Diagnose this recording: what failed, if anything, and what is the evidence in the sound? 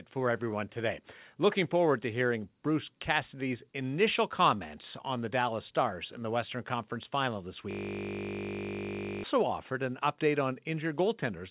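The driver or buffer stage froze from 7.71 to 9.24 s, causing a system hang loop. The hardware kept replaying its ring buffer, so one 20 ms slice of speech repeats end to end and comes across as a steady 50 Hz buzz.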